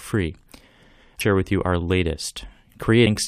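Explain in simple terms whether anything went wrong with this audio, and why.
Damaged data in a compressed stream, at about 1.2 s, just before "with you our". A short run of the compressed speech was corrupted, so the decoder misread it, lost its place, and had to hunt for the next clean block, leaving a brief chirp or blip.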